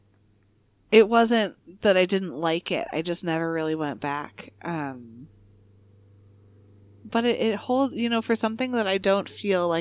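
No technical faults can be heard anywhere in the recording, which holds a steady, unbroken signal throughout.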